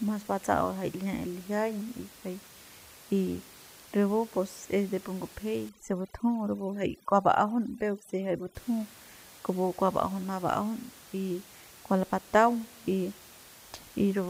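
Speech recording with overdone noise removal from 5.69 to 8.55 s, just after "pus es de pu": the background drops and breaks up into twinkling specks. On a spectrogram, that stretch shows scattered isolated dots and gaps where bands near the noise floor were cut out. The room noise around it sits about 22 dB below the speech.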